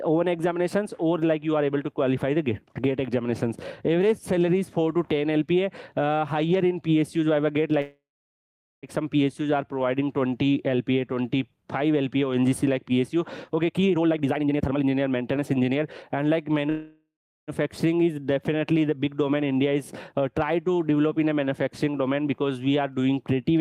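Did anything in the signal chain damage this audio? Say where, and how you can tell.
Yes. At the network and receiver stage there are two call audio freezes, at 7.81–8.86 s and 16.70–17.51 s. The last sound stretches into a fading buzz or hiss, then about 0.79 s and 0.36 s of silence, and resumes exactly where it stopped. Nothing is lost, only delayed, which separates this from packet loss. The likely cause is held-up packets draining the jitter buffer.

From 13.69 to 16.18 s there is a jitter buffer speed-up. The sound runs at about 140% speed, hurried but at unchanged pitch, as the receiver trims short pitch-period slices, roughly a second in total, to shed excess buffered delay. Steady pitch rules out resampling or clock drift.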